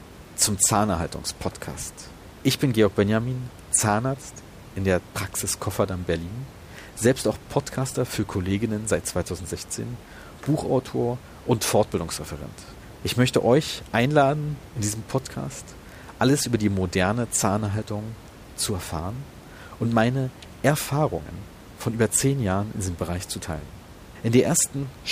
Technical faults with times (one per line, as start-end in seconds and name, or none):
none